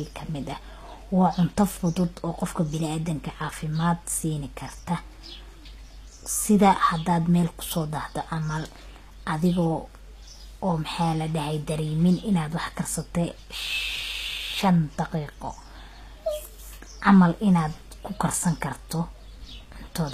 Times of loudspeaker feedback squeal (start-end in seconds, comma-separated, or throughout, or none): none